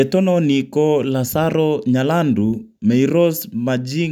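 No technical faults can be heard anywhere in the recording. There is no event to place in time or describe.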